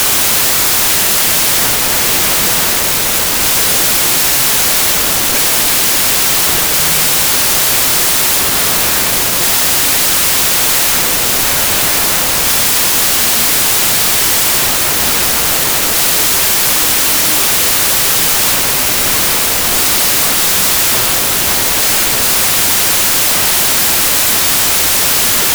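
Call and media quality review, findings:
Loud hiss-like noise over the whole clip, speech buried underneath, slowed to half speed and an octave low. Wrong sample width: 32-bit integer data read as 16-bit, each sample split in two; the low halves add the noise, the high halves keep the speech.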